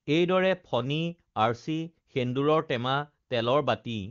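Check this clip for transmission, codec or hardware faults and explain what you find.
No transmission, codec or hardware faults are audible.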